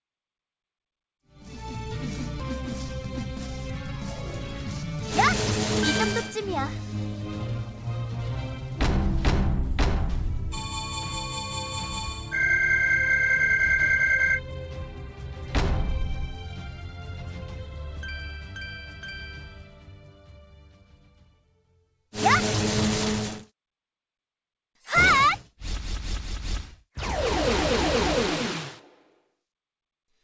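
No faults heard; the level fades in smoothly from about 1 s to 2.01 s, and nothing sits above 8 kHz, consistent with a G.722 wideband call path.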